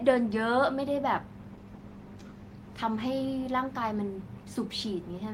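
From 1.52 s to 3.37 s there is a call bitrate drop. The encoder is given far fewer bits, consistent with a fall from about 32 to 17 kbps. The speech turns coarse and watery, with dulled highs, worst for about a second.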